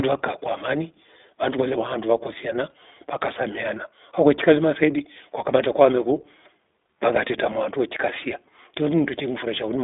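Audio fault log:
Throughout: iLBC codec. The speech carries the plainly audible roughness of the iLBC codec, with a slightly synthetic texture where each 20 ms frame's excitation is coded on its own rather than predicted from the one before. The response is confined to a telephone line band of about 250 Hz to 3.6 kHz, so the low body and everything above it are missing. The coding quality fits a rate near 15.2 kbps.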